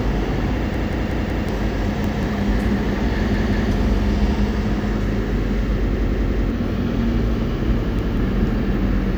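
Repeated buffers at 0.74, 2.04, 3.34, 5.94 and 7.99 s: a 186 ms slice of the sound replays four, one, two, three and one extra times with hard joins, a stutter heard when new audio arrives late. The slice length fits an 8192-sample buffer, and roughly 0.2 to 0.7 s of sound is lost each time.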